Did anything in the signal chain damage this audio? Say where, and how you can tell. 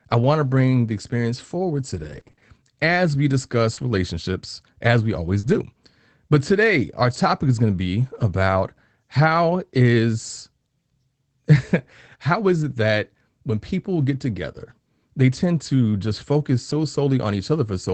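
Yes. From 1.95 to 8.31 s, just after "bring the experience forward", about seven brief ticks and smears appear, none longer than about 40 ms. These are scattered short gaps: network packets lost or late, each patched by the receiver extending the previous sound.

At 16.69 to 16.75 s, after "tend to just focus", a short stretch turns rough and noisy without any dropout. This is a lost packet rebuilt from error correction: the Opus decoder played the low-bitrate backup copy carried in the following packet.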